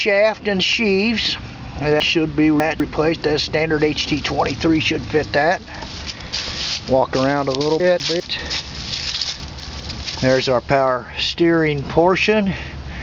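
Chunks out of order occur from 2.0 to 2.8 s, 7.8 to 8.2 s and 9.4 to 9.8 s. In each, a 200 ms block of audio is played after blocks that should follow it. In the first, one block arrives three places late. In the other two, adjacent blocks simply swap. No audio is lost, but every misplaced block leaves three hard joins. These are heard as a brief jumbled passage.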